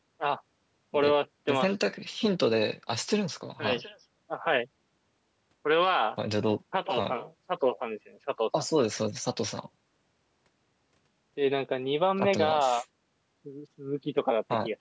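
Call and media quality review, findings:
No faults found in the speech; the call microphone processing shows its normal high-pass bass trim, with nothing above 8 kHz, as expected for this path.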